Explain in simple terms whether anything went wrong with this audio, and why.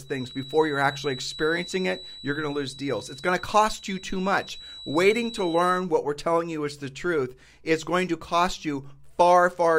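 A thin, high whistle near 3.9 kHz sits quietly behind the speech from the start until 5.91 s, swelling and fading slowly. This is a feedback whistle, likely from the loudspeaker-to-microphone loop hovering at its tipping point. Unlike a runaway howl, it never builds up into a loud squeal.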